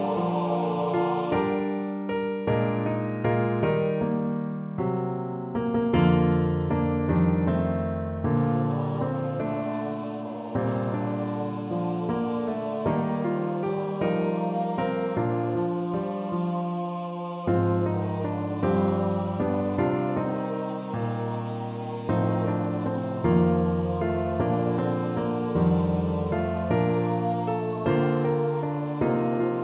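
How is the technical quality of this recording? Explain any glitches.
No glitches are audible; the band stops at 4 kHz, which fits a narrowband telephone codec such as G.711 A-law on a normally working call path.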